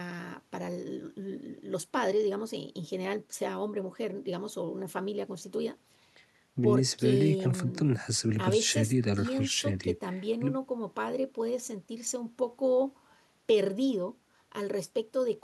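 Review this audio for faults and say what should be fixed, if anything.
Nothing in this audio needs to be fixed, as no faults can be heard.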